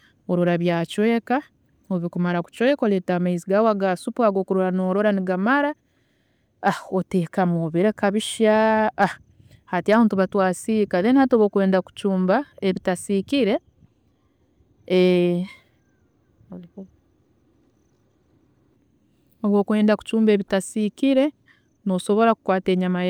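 Three brief crackles break through on loud peaks in this speech recording: from 6.67 to 6.69 s, at 9.02 s just after "obireka bishya", and from 9.92 to 9.96 s just before "nituba twasiika then". Each is hard clipping. The signal exceeded what a stage in the chain could pass by about 2 to 3 dB, so those peaks were sliced flat, and the squared-off tops spray high harmonics that sound like short crackle.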